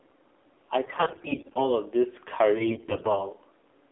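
The whole clip runs through the AMR narrowband mobile codec, probably at its 7.4 kbps mode. Everything sits inside about 300 Hz to 3.5 kHz, and the speech sounds noticeably buzzy and synthetic. From 0.84 to 1.72 s you get AMR bit errors. Around a fifth of the weakly protected bits in each frame come through flipped, so the excitation pulses and the fine pitch and gain values go wrong, and the voice turns hoarse and gargly. A milder stretch from 2.56 to 3.28 s, with roughly a tenth of those bits flipped, leaves it scratchy.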